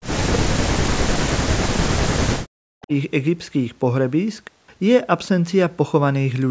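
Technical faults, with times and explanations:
0.0 to 2.92 s, speech suppressed in double talk: the talker's level sinks by as much as about 40 dB, probably because an echo canceller mistook overlapping far-end sound for echo and turned everything down. The waveform envelope caves in, and the spectrogram's upper harmonics fade to near-empty columns.
2.82 to 2.86 s, echo leak: a faint, brief copy of earlier sound about 361 ms behind the original slips through at about 30 dB below the speech, likely loudspeaker pickup the canceller missed. On the spectrogram it is a pale, thin smear; the waveform barely shows it.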